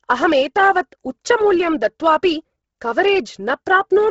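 Speech that has likely passed through heavy Bluetooth LC3 compression at a low bitrate, consistent with about 16 kbps in 10 ms frames. The speech carries a breathy, grainy edge from the noise-filled upper spectrum, and nothing remains above 7.7 kHz.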